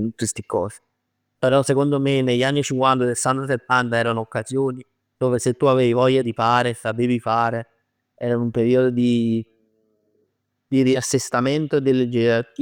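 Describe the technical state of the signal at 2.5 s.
At 2.5 s the speech signal is intact, with no audible technical fault.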